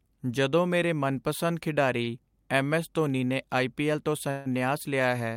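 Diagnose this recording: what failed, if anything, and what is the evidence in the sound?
Network stage, short stall from a late packet at 2.03–2.09 s, after "ਜਦੋਂ ਤੋਂ ਮੇਰੇ ਮਨਪਸੰਦ": the jitter buffer emptied, so the receiver stretched the last sound about 34 ms and then resumed with nothing lost.

Call audio freeze at 4.31–4.47 s, after "ਆਈ ਪੀ ਐੱਲ ਤੋਂ": the sound is held for 145 ms without dropping to silence, then resumes intact. The cause is likely held-up packets draining the jitter buffer.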